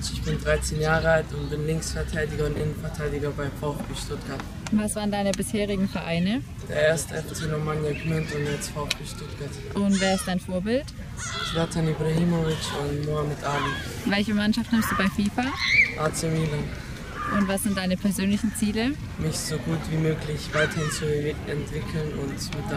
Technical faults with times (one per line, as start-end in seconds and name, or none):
2.56-2.60 chunks out of order